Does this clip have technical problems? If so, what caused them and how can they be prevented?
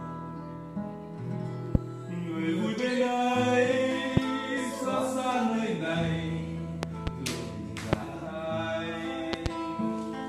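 Yes. Loud pops, sharp thumps roughly 20 to 25 dB above the ongoing sound, occur at 1.75 to 1.78 s, 4.17 to 4.20 s and 7.93 to 7.95 s, with double pops at 6.83 to 7.10 s and 9.33 to 9.48 s. The likely cause is a sudden voltage step from a plug, a switch, static or a driver glitch, which the following circuits turn into a brief pulse. To prevent them, secure connectors, avoid switching or plugging during recording, guard against static and keep audio drivers stable.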